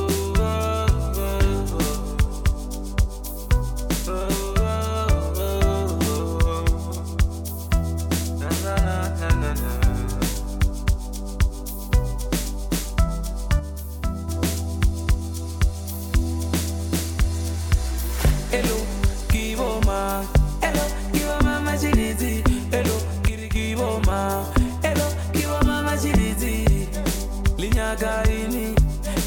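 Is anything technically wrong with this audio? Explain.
Yes. Twice the level drops abruptly by about 6 dB and then returns. The first dip runs from 13.60 to 14.28 s and the second from 23.28 to 23.56 s. The likely cause is one channel drops out. If one stereo channel goes silent, material shared by both channels halves in the mono sum. Anything carried only by the lost channel vanishes. Each dip sounds like a brief, sudden quieting, with full level snapping back afterwards.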